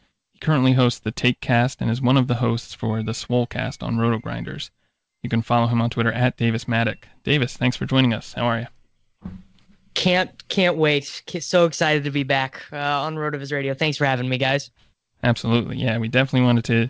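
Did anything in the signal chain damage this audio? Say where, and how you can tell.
No, nothing in the signal chain damaged this audio; it passed through a WebRTC call path using G.722 at 64 kbps, which leaves nothing above 8 kHz.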